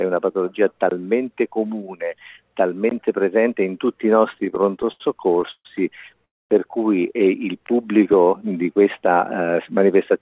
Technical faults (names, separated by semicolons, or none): repeated stalls (stutter); call audio freeze; jitter buffer slow-down